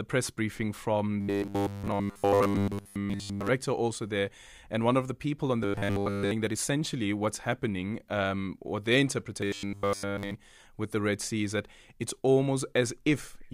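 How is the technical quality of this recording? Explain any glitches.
The recording has three glitches of one kind: robotic sound from repeated short buffers. They occur from 1.21 to 3.50 s, after "press briefing from"; from 5.63 to 6.32 s, after "of the people on"; and from 9.41 to 10.34 s, before "with the". Each becomes a rigid, metallic buzz at 100 Hz. The likely cause is new audio arriving too seldom. The last 10 ms gets looped while nearly all the real speech is skipped.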